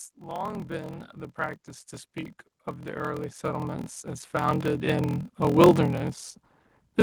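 A speech clip with two faults. Throughout, a block size mismatch (padded) puts a steady 41.7 Hz buzz under everything and slows delivery to 0.889 of normal speed while pitch stays put, which fits 1024-sample blocks padded out to 1152 with silence. That unchanged pitch rules out a sample-rate error, and the slowing separates it from dropped blocks. Between 0.14 and 5.71 s, automatic gain rising lifts the level by about 20 dB. Voice and background noise swell together over more than five seconds, so this is a control loop chasing a quiet input rather than a deliberate fade or fast compressor pumping.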